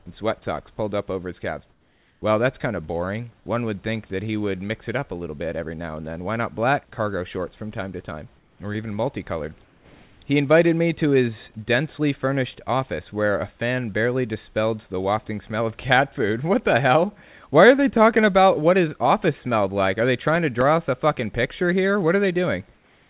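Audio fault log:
0.76 to 0.78 s, sound dropped by the voice detector. Between "and sweat socks" and "up over his calves", about 20 ms of speech is swapped for a brief patch of flat noise. Roughly 10 ms of real sound goes missing. A quiet word ending was likely taken for background by the sender's voice detector, which stopped sending. The receiver filled the gap with comfort noise, so the speech thins out for an instant before it resumes.
1.70 to 2.22 s, 8.38 to 8.60 s, 9.64 to 10.20 s and 22.74 to 23.10 s, comfort noise in place of the background. In each pause the real room noise gives way to a smooth, featureless hiss. The first gap follows "up over his calves" and ends at "well that's kind of". The third follows "time or even multicolored". The fill is about 4 dB quieter than the room in the first gap and about 3 dB quieter in the second and last. In the third it matches the level but still loses the room's texture. 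This is likely discontinuous transmission: the sender stopped during silence, and the receiver synthesized rough background noise. Like the speech, it stops near 4 kHz, which fits a narrowband G.711 call path.
19.85 to 21.12 s, CD scratch ticks. Six sharp clicks fall across this stretch, each no more than about 2 ms long. They come at a steady pace that fits one disc revolution per tick. A blemish on the disc wiped out more data than error correction could rebuild, and the player patched or muted the damaged samples, leaving these tiny regular snaps.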